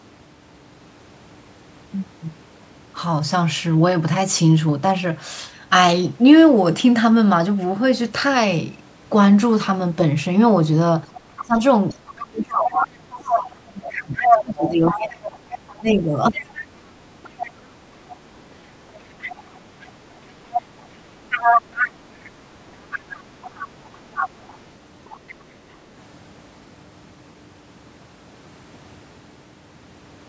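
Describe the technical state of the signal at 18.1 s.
Right at 18.1 s you're just past a brief dip in the speech that runs from 17.94 to 18.07 s. It sounds like speech suppressed in double talk: the level sags by about 15 dB for a moment. The likely cause is the echo canceller hearing both sides at once, failing to tell the near talker from the loudspeaker echo, and pulling both down together. Throughout, the call's mic processing keeps everything below 8 kHz.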